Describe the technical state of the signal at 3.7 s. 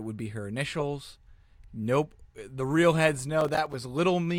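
Processor overload crackle runs from 3.41 to 3.74 s: the processor misses around ten short buffers of about 5 ms, each dropping to silence, producing gritty crackle over the speech.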